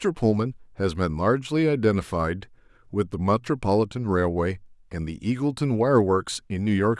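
Nothing stood out as a fault on listening to this recording.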